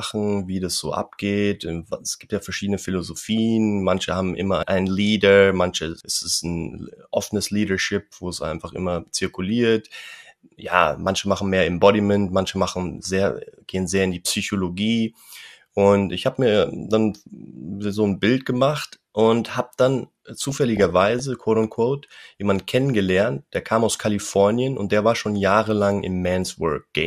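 From 20.36 to 21.20 s the speech shows DAB burbling. Reception weakened enough that bit errors, at a rate of roughly a fifth of a percent, slipped past the error correction into the MP2 data. Corrupted samples then put short noise blips into single sub-bands, and corrupted scale factors made individual sub-bands leap in level for up to a frame, which fits several dozen damaged frames. The result is burbling noise laid over the speech for just under a second.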